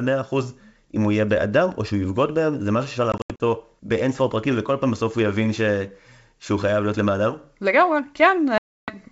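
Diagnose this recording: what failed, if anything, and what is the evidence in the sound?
Packet loss on an ADPCM call, at the network stage, breaks this G.722 wideband speech twice. From 3.12 to 3.43 s, about 160 ms drops out as hard-edged silent gaps scattered over 280 ms, the longest 80 ms, which points to several lost packets. From 8.58 to 8.92 s one 300 ms hole appears. Silence filled the gaps while the decoder's predictor and step size drifted from the sender's, so speech resumes slightly distorted before settling.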